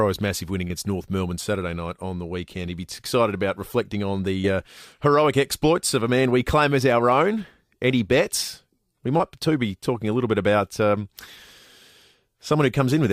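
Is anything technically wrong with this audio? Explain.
Yes. Short concealed packet loss occurs three times, at 0.67–0.72 s, 4.42–4.46 s and 9.18–9.21 s. Each time about 20 ms of audio arrived too late, and the decoder extended the preceding sound to fill the gap, heard as a brief smear or wobble.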